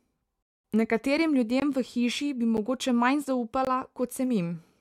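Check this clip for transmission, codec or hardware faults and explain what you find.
Two kinds of fault are present in this speech clip: one rebuffering stall and three blocks of digital silence.

From 0.43 to 0.64 s there is a rebuffering stall. Playback ran dry, paused for about 219 ms until more data arrived, and then picked up exactly where it stopped. Unlike a dropout, no speech is missing. The speech is simply delayed, which lengthens the clip.

Blocks of digital silence occur at 1.60 to 1.62 s (20 ms, just before "v hiši bi"), at 2.57 s (9 ms, just after "v hiši bi"), and at 3.65 to 3.67 s (20 ms). A block of zeros was played, which fits an output buffer that wasn't filled in time. The hard edges make each one a click or a tiny hole.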